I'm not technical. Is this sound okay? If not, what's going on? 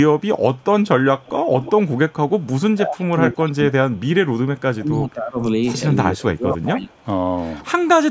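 No. Echo leak: a loudspeaker's echo canceller likely let some sound back into the call, so a mostly faint copy trails about a fifth of a second behind, at 0.19–0.64, 1.2–1.72 (loudest), 1.96–2.47, 4.56–4.6 and 6.89–7.06 s.

Speech suppressed in double talk: with both sides talking, the echo canceller likely turned the talker down too, so speech sinks sharply or drops out at 2.75–4.24, 4.61–5.38 and 6.11–6.89 s.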